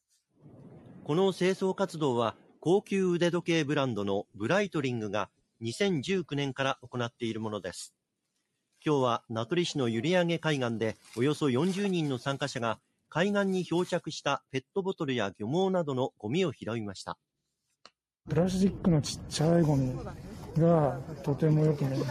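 Four times the sound sinks abruptly in level, as if pulled under: from 5.27 to 5.63 s, 6.76 to 6.91 s, 8.36 to 8.84 s and 12.77 to 13.12 s, by about 21, 18, 21 and 21 dB. Sustained and decaying parts thin out or end early while sharp onsets still come through. This is sound cut by the noise suppressor, which judged these stretches to be noise and attenuated them well below the surrounding material.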